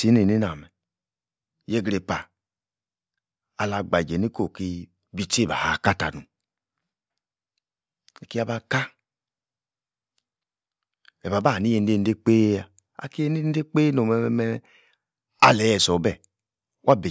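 No technical faults can be heard anywhere in the recording. There is nothing here that calls for a timestamp or a closer listen.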